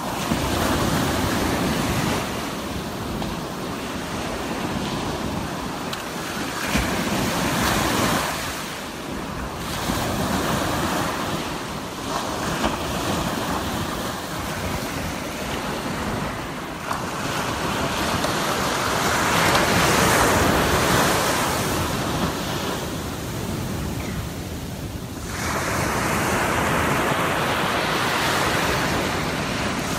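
No technical fault can be heard anywhere in the audio. There are no events to time and no causes to explain.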